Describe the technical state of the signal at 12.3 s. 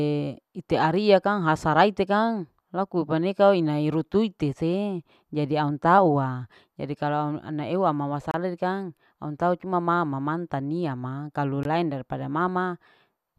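At 12.3 s the speech signal is intact, with no audible technical fault at that moment.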